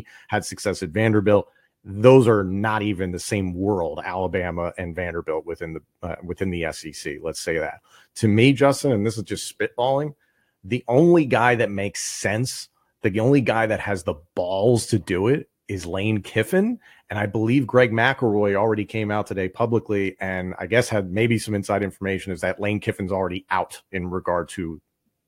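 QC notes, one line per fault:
No faults found in this speech recording.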